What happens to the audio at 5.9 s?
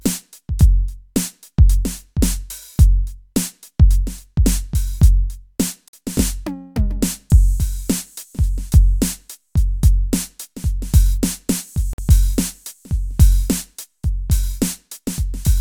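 At 5.88 s the music drops out for 50 ms, until 5.93 s, a gap between chunks. The audio appears to be delivered in blocks of about 6 s, and silence sits at the join instead of the next block following on directly. Nothing is lost, but the flow stops dead. On the waveform this is a flat line with abrupt edges; on a spectrogram, a clean vertical empty strip cutting across every frequency.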